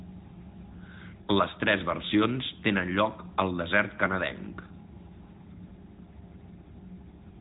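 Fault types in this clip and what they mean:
AMR narrowband mobile codec: the speech passed through the AMR-NB mobile codec, whose vocal-tract model and sparse pulse excitation leave plainly audible buzzy, synthetic damage, consistent with a rate near 10.2 kbps. On a spectrogram, energy stops flat at 3.8 kHz throughout.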